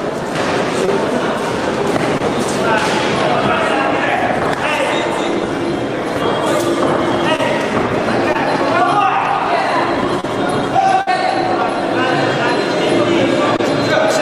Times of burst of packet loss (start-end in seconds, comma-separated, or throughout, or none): 11.01-11.08